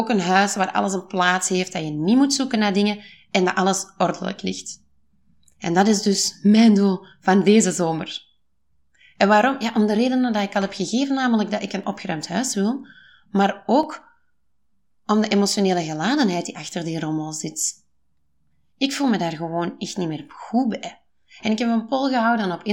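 From 11.84 s, after "namelijk dat ik een", to 16.83 s, before "die rommel", periodic USB or driver dropouts skip under a millisecond of speech every 1.0 s, giving about seven ticks. Unlike random crackle, they keep strict one-second spacing.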